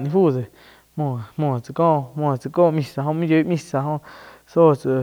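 From start to finish, the speech has been reduced to a low bit depth with dither: random noise was added before each sample was rounded to a coarse set of levels, which fits a 10-bit signal. The dither turns what would have been distortion tied to the speech into a steady, even hiss running under everything, some 40 dB below the speech. The hiss does not come and go with the speech, and there is no grittiness on the sound itself.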